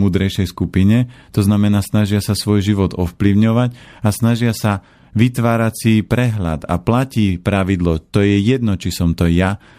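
No technical faults can be heard anywhere in this speech clip.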